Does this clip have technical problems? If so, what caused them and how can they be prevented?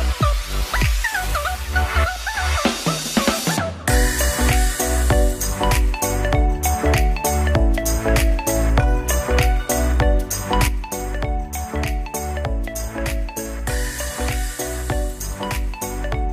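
Yes. At 10.68 s there is a sudden gain jump. The level drops by about 6 dB in one step and stays down to the end. The background noise falls with the sound, so the change happened in the digital chain, not at the source. A drop of this size likely comes from a one-bit shift or a gain setting applied between two samples without a ramp. Smoothing every gain change over a few milliseconds prevents it.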